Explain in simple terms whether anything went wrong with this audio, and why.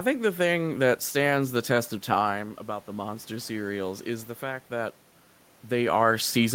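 After "stands the test of", around 2 s, the talker moves away and the voice drops. From 2.32 to 4.99 s the automatic gain rising fault follows: the level control slowly turns itself up, so voice and room noise swell together over about two and a half seconds.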